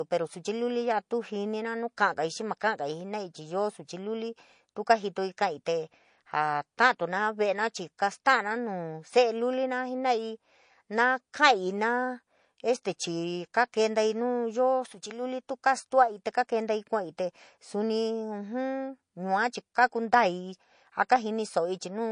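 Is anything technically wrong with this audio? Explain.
Yes. MP3 compression damage is plainly audible throughout the speech, likely from an encode at a bitrate around 40 kbps. Short of bits, the encoder removes treble above a fixed cutoff and lets weak frequency components flicker between frames, leaving a watery, swirling texture and metallic chirps on s sounds.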